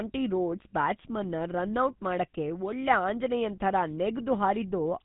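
From start to finish, the speech carries the signature of the GSM full-rate codec, with damage that is plainly audible. The codec rebuilds the voice from a vocal-tract model driven by a thinned, pulse-like excitation, which fits the 13 kbps full-rate coder. Nothing survives above 3.8 kHz. What separates this from simple low-pass filtering is the buzzy, gravelly roughness woven into the voice itself, not just a loss of brightness.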